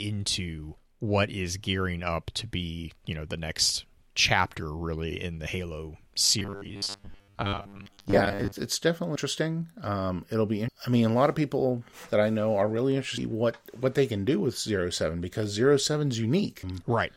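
A speech recording with robotic sound from repeated short buffers between 6.39 and 8.59 s. For those two seconds the voice becomes a rigid, metallic buzz pitched at 100 Hz that only loosely tracks the speech, with most of the real audio in that span lost. A 100 Hz drone is what a 10 ms chunk replayed back to back produces, likely because audio was arriving too slowly and playback kept reusing the last buffer. A spectrogram would show evenly spaced horizontal lines at multiples of 100 Hz, and the waveform would repeat the same 10 ms shape over and over.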